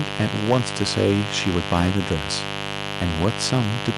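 A raspy mains buzz runs through the whole speech clip, quite loud against it. Switching spikes from 50 Hz mains add harmonics reaching into the kilohertz range. Microphone overload flattens the loudest peaks from 0.2 to 1.21 s, 1.47 to 2.17 s, and 3.02 to 3.61 s, likely from excessive input gain, overshooting by about 4 to 5 dB and adding harsh crackle.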